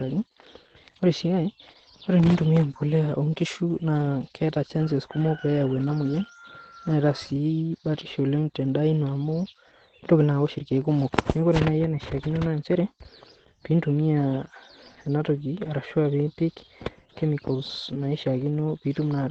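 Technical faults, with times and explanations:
Throughout, Opus voice compression: the speech is band-limited, with nothing above about 8.6 kHz, so sibilants lose their edge. The coarse linear-prediction coding points to a low bitrate, near 12 kbps. It leaves the voice plainly muffled, hoarse and faintly robotic.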